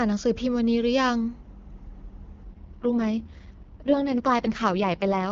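From 2.43 s to the end, an AMR rate drop turns the wideband speech rough and synthetic, consistent with a fall from about 23.85 to 6.6 kbit/s. On a spectrogram, the 7 kHz band stays intact but the harmonic detail smears, with no gap in the waveform.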